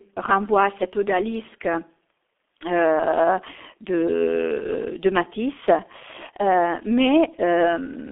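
Throughout, the speech carries heavy G.723.1 codec damage, consistent with about 6.3 kbit/s. Coarse 30 ms frames and a slowly updated voice model make it muffled and hoarse, with blurred consonants. A spectrogram shows energy only between 300 Hz and 3.5 kHz.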